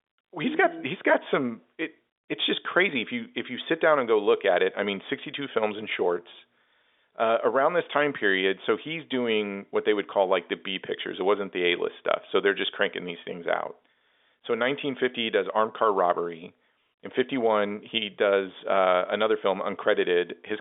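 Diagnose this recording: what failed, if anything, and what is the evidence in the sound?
Nothing stood out on listening; the speech comes across as an ordinary telephone line, with the narrow band and faint coding grain that fixed-line transmission normally carries.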